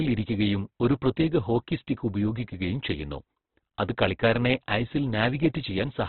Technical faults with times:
0.00-6.09 Opus compression

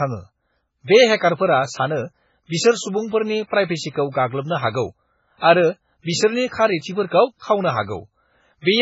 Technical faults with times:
0.00-8.81 MP3 compression

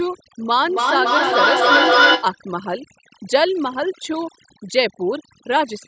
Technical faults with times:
0.00-5.87 overdone noise removal
0.52-2.41 feedback echo between two devices

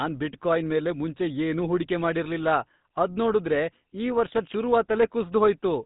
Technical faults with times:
0.00-5.86 GSM full-rate codec

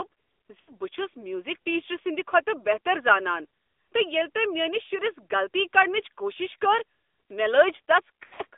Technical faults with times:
0.00-8.57 AMR narrowband mobile codec
0.60-0.73 lost AMR speech frames
8.24-8.42 lost AMR speech frames

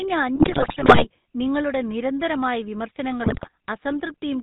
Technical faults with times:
0.00-4.42 GSM full-rate codec
0.36-1.06 GSM bit errors
3.24-3.49 GSM bit errors

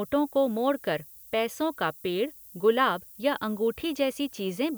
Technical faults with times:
0.00-4.77 low bit depth with noise shaping

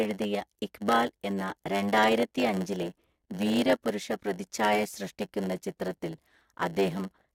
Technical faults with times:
0.00-7.34 block size mismatch (padded)

